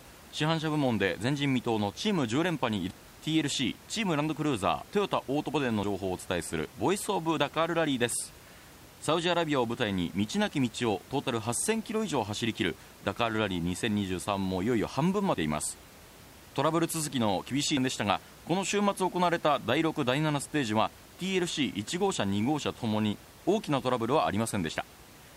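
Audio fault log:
2.90 s and 5.83 s, compressed frames skipped. The sound jumps ahead about a fifth of a second, then a couple of frames. Whole 26.1 ms frames are left out at each join.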